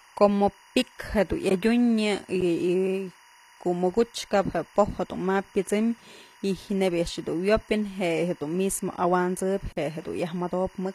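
Timecode bleed runs throughout: a linear timecode signal leaking from a neighbouring line adds a steady chirping warble, switching between roughly 1 and 2 kHz, well below the speech and consistent with 24-frame code. The treble also sounds gritty and metallic, with s sounds turned lispy, and this is likely HE-AAC compression, whose spectral band replication rebuilds the upper band from copied lower bands at a low bitrate around 24 kbps. A block of digital silence at 1.49 s gives a 15 ms dropout, heard as a tick. A second block of digital silence, from 9.73 to 9.77 s, opens a 43 ms hole.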